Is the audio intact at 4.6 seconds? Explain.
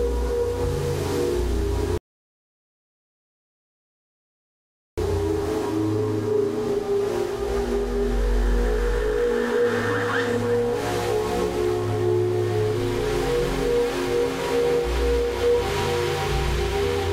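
No. At 4.6 s the playback is inside a rebuffering stall running from 1.98 to 4.98 s: the player exhausted its downloaded audio and fell silent for 3 s. Unlike a dropout, nothing is lost; the sound resumes exactly where it halted, just later.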